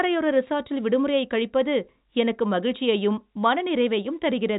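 Nothing stood out as a technical problem on listening to this speech, which comes over the G.711 telephone coding as that path normally sounds, with nothing above about 3.8 kHz.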